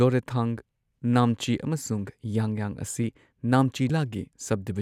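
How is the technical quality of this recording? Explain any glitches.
One glitch stands out. At 3.89 s, compressed frames were skipped, about 150 ms of the speech, consistent with several 24 ms frames, so the sound jumps ahead.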